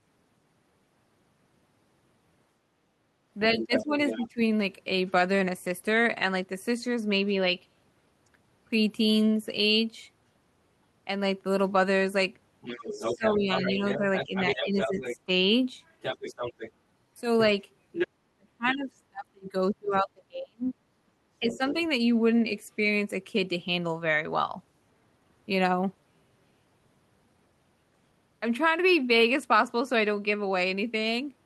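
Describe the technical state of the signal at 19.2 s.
Speech suppressed in double talk affects 19.2 s, inside a span running from 18.2 to 21.75 s. The speech level is pulled down sharply, at its deepest by around 40 dB, so the talker nearly vanishes, and the suppression adds up to roughly two seconds across that stretch. The likely cause is an echo canceller meeting simultaneous talk from both ends, failing to tell the near talker from loudspeaker echo, and attenuating both together.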